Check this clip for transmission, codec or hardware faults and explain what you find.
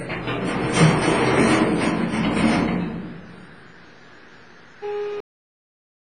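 Two faults are audible in this recording of everyday sounds.

Throughout, the sound is washy and ringing, with hiss that swells and fades with the signal and nothing above 10.3 kHz, most likely WMA compression at a low bitrate near 24 kbps. Unlike a plain low-pass filter, it smears energy in time.

At 5.20 s there is a cut-off end: the last buffers never played, so the sound stops mid-event and drops straight to digital silence with no natural decay or fade.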